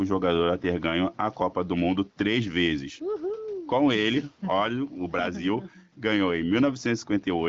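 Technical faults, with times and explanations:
Throughout, gain pumping: a breathing gain swing of around 10 dB, with the room noise sitting about 43 dB below the speech. Loud and soft syllables land squashed close together in level. The likely cause is input gain set far too high for the microphone, with a fast limiter or compressor clamping down on each peak and releasing in the gaps.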